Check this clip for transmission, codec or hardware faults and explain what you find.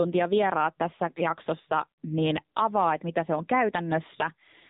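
The speech has been through the AMR narrowband mobile codec for its whole length. Nothing above about 3.8 kHz survives, so the sound is thin and muffled like a phone call. The codec models the vocal tract and drives it with a few pulses per short subframe. Damage is heavy here, which fits a low mode near 6.7 kbps. Few bits means a coarse excitation, so the voice turns buzzy and synthetic.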